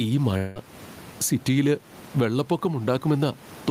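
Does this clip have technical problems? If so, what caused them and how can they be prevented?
Yes. Gain pumping runs through the whole clip, with the level swinging by something like 15 dB. The likely cause is input gain set far too high for the microphone, with a fast limiter or compressor clamping down on every peak and releasing in the gaps. This flattens the difference between loud and soft passages; the room noise sits about 31 dB below the speech. Prevent it by lowering the microphone gain so the limiter rarely engages, and by using slower attack and release settings.

A long network dropout occurs from 0.37 to 0.58 s. For about 180 ms the receiver extends the last sound it received as a fading buzzy, hissy tail, and the audio picks up afterwards with that stretch missing. This is likely a burst of lost packets, with the receiver's concealment covering the gap rather than leaving silence. 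Prevent it by using a more stable connection, for example a wired link instead of congested Wi-Fi, and by enabling forward error correction or a larger jitter buffer.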